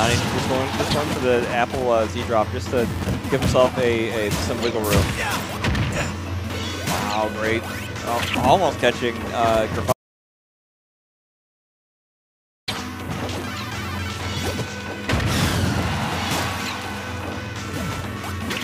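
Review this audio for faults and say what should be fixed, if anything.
Audio dropout to silence from 9.93 to 12.68 s: the sound cuts to silence with no room tone for 2.75 s, likely because the input link or device dropped while recording continued. To prevent it, secure cables and connections, disable unintended mutes, and monitor input levels live during capture.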